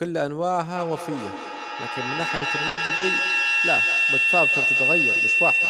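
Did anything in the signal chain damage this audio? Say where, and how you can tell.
Yes. Feedback howl sets in at 0.76 s and runs to the end of the clip. The stage is the acoustic loop between two devices on the same call in one room. The microphone hears the loudspeaker, and each round trip adds level. The repeats narrow to a tone near 3 kHz. The tone pulses roughly every 200 ms, which fits the loop delay. At its loudest it sits about 3 dB above the speech.

Repeated packet loss (robotic sound) appears from 2.35 to 3.03 s. The stage is the network. There are four gaps, missing 220 ms in all, and the longest is 100 ms. The receiver filled 240 ms by stretching the last good sound, so about 35% of that span is concealment. Roughly 70 ms of it is rebuilt. Holes come back before the speech recovers, so the sound turns choppy with pieces missing.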